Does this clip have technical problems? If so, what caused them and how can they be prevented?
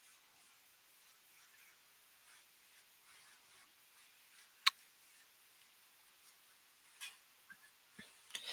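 No, there are no technical problems to report in this speech clip. Nothing in it calls for a cause or a preventive step.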